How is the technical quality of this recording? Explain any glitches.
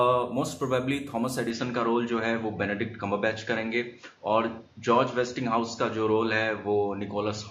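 The recording has one clear fault. From 1.50 s to the end, the input switched to a poorer device. The sound loses everything above 7.1 kHz and picks up a faint new noise floor, roughly 40 dB down, with no gap and little level change. The new tone and noise, not just the band-limiting, suggest a likely device change rather than a filter or codec.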